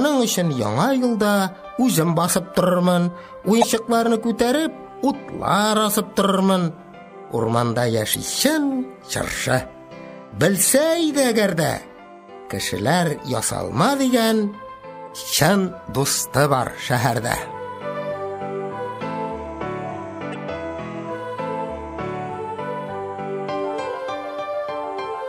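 Damaged data in a compressed stream breaks this audio five times, in short bursts of about 35 to 50 ms at 3.59–3.64, 8.11–8.16, 11.85–11.89, 15.04–15.08 and 20.31–20.36 s. Corrupted bytes make the decoder misread frames and lose sync. Each burst appears as a brief disruption on a spectrogram and in the waveform.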